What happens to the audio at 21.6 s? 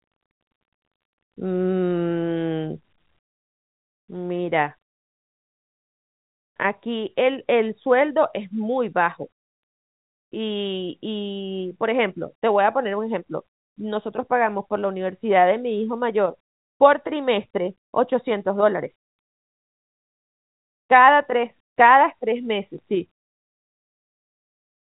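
At 21.6 s the speech is still sitting about 6 dB lower than it was before 3.65 s. That step, held through to the end of the clip, is the mark of one channel dropping out, with the stereo pair likely losing one side before being summed to mono. The sound shared by both channels loses half its contribution, and anything carried only by the missing side is gone. Unlike a fade or a gain ride, the drop is instant and flat. Unlike a brief dropout, it never recovers. Throughout, the telephone band still stops near 3.8 kHz.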